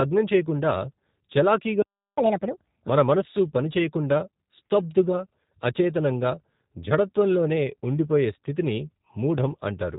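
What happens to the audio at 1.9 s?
A playback stall cuts the sound from 1.82 s to 2.17 s, about 0.35 s of silence, likely from the player running out of data. The waveform shows a flat line, and the spectrogram shows an empty vertical band.

The G.729 codec's 8 kbit/s encoding, which rebuilds speech from a filter and sparse pulses, makes it audibly rough and synthetic. The spectrogram shows nothing above 4 kHz.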